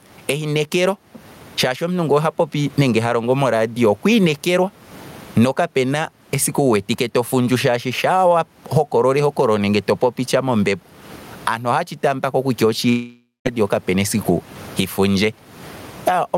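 Throughout the speech, gain pumping is present: the gain swings by around 20 dB, against a room noise floor normally about 39 dB below the speech. This is likely from gain set far too high and a fast limiter clamping it. The waveform looks flattened.

From 12.89 to 13.47 s, a long network dropout likely cuts out about 0.56 s of audio. The receiver stretches the last sound into a fading buzz or hiss, then about 180 ms of near-silence follows before the speech resumes with that stretch missing. A spectrogram shows smeared, decaying bands and then a blank gap.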